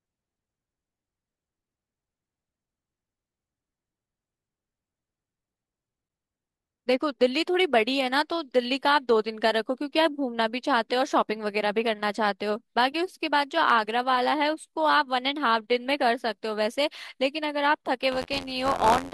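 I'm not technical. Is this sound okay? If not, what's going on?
No. From 18.11 s to the end, buffer tearing adds a steady 86 Hz robotic buzz: small slices of speech from a moment earlier keep cutting in, which fits a 512-sample buffer.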